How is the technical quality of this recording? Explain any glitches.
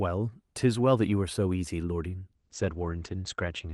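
The speech has one audible glitch near the end. From 2.37 s to the end, a call bitrate drop coarsens the coding and cuts the top band from 12 kHz to 8 kHz, consistent with about 40 falling to 12 kbps. The sound turns rough and muffled, and a spectrogram shows the energy above 8 kHz abruptly vanishing.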